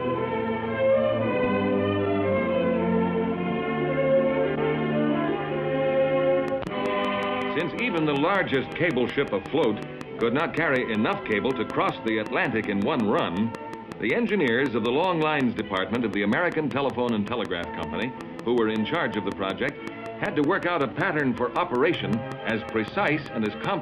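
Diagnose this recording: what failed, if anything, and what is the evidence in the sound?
Train of clicks from 6.48 to 23.65 s: regular pulses at 5.36 per second, roughly 10 dB above the sound, likely interference entering the analogue wiring.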